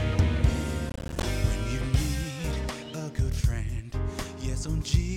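The processor fell behind between 0.90 and 1.23 s, missing buffer deadlines repeatedly, which produces processor overload crackle: around fifteen short silent dropouts with hard edges, spaced in a way that suggests buffers of roughly 10 ms, forming a gritty tearing burst that stops once the load passes.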